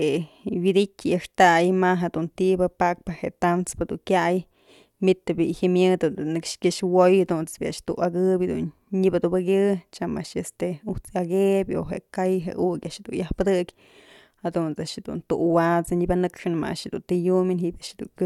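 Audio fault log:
No faults detected.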